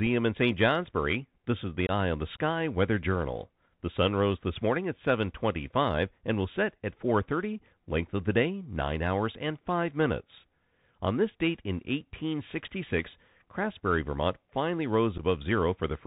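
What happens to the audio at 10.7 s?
At 10.7 s the speech is passing through the Bluetooth CVSD headset codec, which runs across the entire clip. Its one-bit up/down tracking with adaptive step size, consistent with a 64 kbps link, caps the band at 4 kHz, leaving scratchy sibilants, distorted loud high content and a granular hiss underneath.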